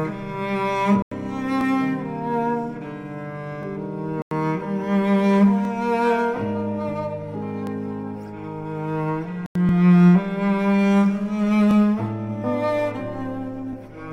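At 1.02 s the sound drops abruptly into a hole about 93 ms long. The same block of digital silence recurs at 4.22 s and 9.46 s. The equal lengths fit a 4096-sample buffer left unfilled and zeroed.

From 1.61 s a brief stutter is heard every 2 s, at 1.61, 3.63, 5.65, 7.67, 9.69, 11.71 and 13.73 s. These are overlapping chunks: each 2-second chunk begins 20 ms before the previous one ends, so that sliver plays twice at every join.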